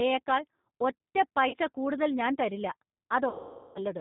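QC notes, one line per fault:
Throughout: G.729 codec. The whole clip has been through G.729A at 8 kbit/s, and the damage is plainly audible. The decoder rebuilds each 10 ms frame from a vocal tract filter, a pitch predictor and a handful of pulses, so the speech stays intelligible but comes out rough and slightly synthetic. Nothing above 4 kHz survives, which leaves the audio band-limited and dull.
1.49–1.55 s: VoIP packet loss concealed by the speech codec. About 40 ms of audio is missing just before "കൂടുതൽ ഞാൻ", which fits two lost packets. The decoder fills the gap by extending its last pitch and filter settings at falling gain, so the sound smears into a short buzzy tone or coloured noise rather than a clean dropout. Because each frame builds on the one before, the words that follow start weak or distorted.
3.29–3.80 s: VoIP packet loss concealed by the speech codec. About 460 ms is lost here, consistent with around 23 consecutive packets. 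The decoder carries on extrapolating from its last frame, and as it lowers the gain frame by frame the sound stretches into a buzzy tone or coloured noise that fades out across the half second. Whatever was being said in that span is replaced rather than preserved, and output takes some tens of milliseconds to recover once packets return.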